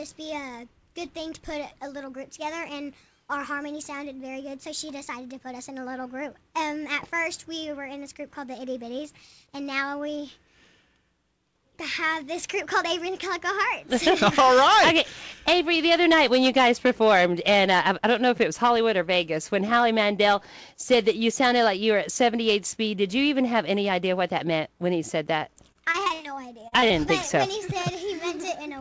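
From 25.72 to 26.92 s, repeated packet loss (robotic sound) leaves short holes, up to 61 ms, patched with continued sound. Unlike a single dropout, the quick repeats turn choppy.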